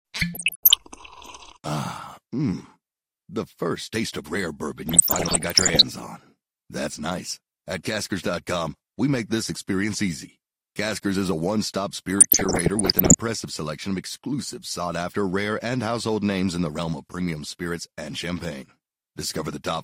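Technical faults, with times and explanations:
0.34–0.85 s, 4.89–5.83 s (right after "taste of rare bourbon") and 12.18–13.16 s (just before "selection of exclusive"), DAB burbling: weak reception lets about one percent bit errors through into the MP2 data, so corrupted samples put short blips of noise into single sub-bands, giving a burbling over the speech.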